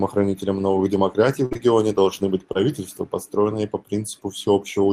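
At 1.45 to 1.53 s there's a burst of packet loss: roughly 55 ms of the last sound stretched and faded, then about 60 ms of speech simply skipped. Right after, at 1.53 and 1.57 s just before "должны быть", two short concealed packet losses each patch about 20 ms with a brief smear. Another one at 2.53 s, between "должны быть" and "построенные по", leaves a quick wobble.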